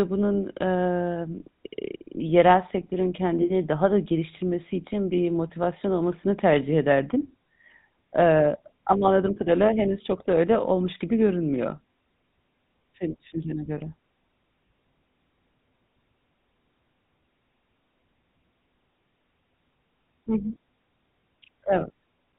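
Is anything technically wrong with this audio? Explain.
Yes. The whole clip carries GSM full-rate codec damage, and there are two short dropouts from lost GSM frames.

GSM full-rate codec: Throughout the speech, nothing passes above 4 kHz, and a buzzy, gravelly roughness is plainly audible. The codec rebuilds each stretch from a vocal-tract model driven by sparse, regular pulses, which fits a 13 kbps GSM full-rate stream.

Lost GSM frames: At 3.42–3.52 s, between "emm eee yerel sektörün" and "daha da geliştirmesi için", about 80 ms turns into a rough, metallic ring, which fits four lost 20 ms frames. A briefer ring follows at 13.78–13.81 s, consistent with one lost frame. The decoder repeats the last good frame's settings.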